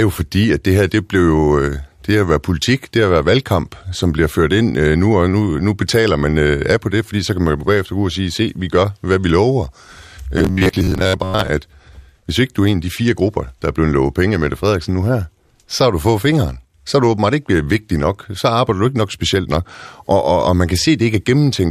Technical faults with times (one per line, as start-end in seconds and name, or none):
10.38-11.49 robotic sound from repeated short buffers